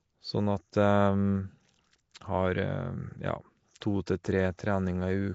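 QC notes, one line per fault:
Throughout, Nellymoser compression: speech has a rough, hissy halo and smeared underwater quality with nothing above 7.7 kHz. Starved bands are noise-filled, likely from Nellymoser Asao at a rate consistent with 32 kbps.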